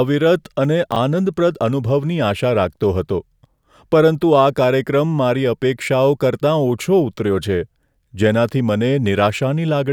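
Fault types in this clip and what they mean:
Chunks out of order: a 10 ms piece of audio was delivered or written late and slotted in after material that should have followed it, so the stream around 0.92 to 0.96 s plays in the wrong sequence. Nothing goes missing, but the speech briefly sounds scrambled, with three abrupt joins. The 40 ms disturbance suggests that piece landed about three chunks behind its proper place.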